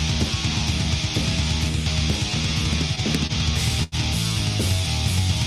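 At 3.27 s the sound briefly hangs: a short stall from a late packet, where the packet arrived after its playout time, the jitter buffer ran dry, and the receiver held the last sound for about 25 ms before resuming. A longer stall follows at 3.83 s, stretching for about 87 ms. Unlike a dropout, nothing is skipped, since playback picks up exactly where it paused, but each stall leaves the timing later by its own length.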